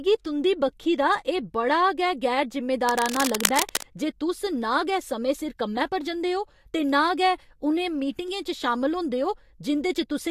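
Dense, uneven scratching rustles over the speech from 2.89 to 3.97 s, between "एह् बड़ा गै गैर" and "जे तुस ना गै", nearly as loud as the speech. This is cable scratch noise, likely from a worn connector being moved.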